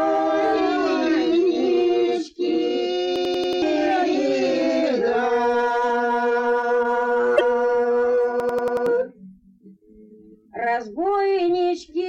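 A machine-gun stutter runs from 3.16 to 3.62 s: one 92.9 ms slice of sound repeats exactly five times at about 10.8 Hz, and roughly half a second of audio is missing once it ends. This is a system hang loop. The computer or driver stalled while the playback hardware kept replaying the same ring buffer, whose length fits a 4096-sample buffer.

From 7.33 to 7.41 s a brief glitch breaks in. This is damaged data in a compressed stream. Corrupted bytes left the decoder unable to read those frames, so it lost sync and skipped ahead to find the next valid frame header.

From 8.40 to 8.86 s the same stutter returns, again a 92.9 ms loop repeated five times at about 10.8 Hz with roughly half a second lost. It is a second system hang loop with the same buffer length.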